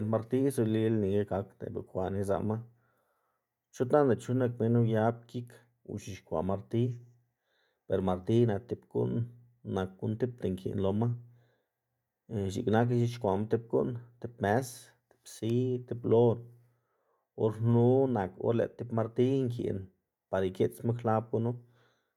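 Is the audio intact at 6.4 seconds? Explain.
Yes, the speech at 6.4 seconds plays through intact, with no dropout, click, distortion or other break audible at that moment.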